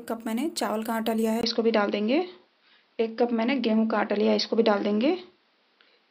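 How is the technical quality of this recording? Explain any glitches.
From 1.41 s to the end, the sound turns dull and boxy after a brief gap of about 20 ms, with nothing above 5.8 kHz, a level shift of a few dB and a faint new noise floor. The likely cause is an input switched to a poorer device with a narrower band.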